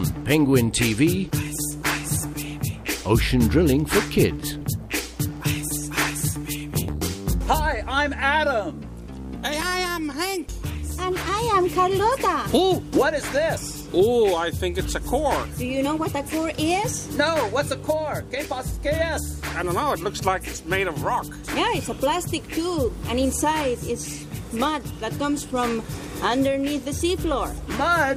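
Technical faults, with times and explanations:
4.60 s, 15.84–15.86 s and 20.55 s: damaged data in a compressed stream. Each one is a tiny blip, only 10 to 20 ms long. At each spot some bytes of the encoded stream got mangled, so the decoder chokes on those frames, loses its lock on the frame structure and has to hunt for the next valid header. That garbage-in moment comes out as a brief glitch before things settle.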